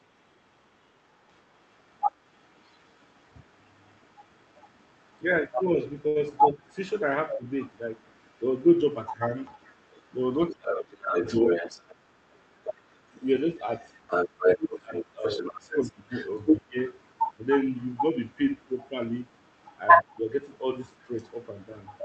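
From 1.29 s to the end, a second voice sits only a few decibels under the main speech, likely the other side's voice leaking through an echo canceller that failed to remove the loudspeaker signal. On a spectrogram it appears as extra, overlapping harmonic traces beneath the talker's, all capped near 8 kHz by the call path's band limit.

At 6.07 s there is a short stall from a late packet. The jitter buffer ran dry, and the receiver stretched the last sound for about 80 ms before resuming exactly where it stopped, so nothing is lost. It sounds like a sound held briefly too long, and the waveform shows a repeated stretch of nearly identical cycles.

From 6.52 to 7.41 s, speech is suppressed in double talk. With both sides active, the canceller likely turned everything down together, producing a small dip of a few decibels lasting around a tenth of a second. It appears as a faint notch in the waveform envelope.

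From 10.47 to 13.18 s, the same double-talk suppression is much deeper, roughly 35 dB, and affects around a second and a half of the talker. The spectrogram shows near-empty gaps across the band.

Inside that stretch, from 11.26 to 11.93 s, a jitter buffer speed-up plays the audio at 111% speed without changing the pitch. The receiver drained surplus buffered audio by cutting short pitch-period fragments, removing about 70 ms. The result sounds hurried, and the harmonic lines on the spectrogram stay level while the syllables compress in time.

From 14.44 to 16.77 s, double-talk suppression returns at about 20 dB deep, again affecting around a second and a half. The talker's level drops, shown as lowered sections of the waveform envelope.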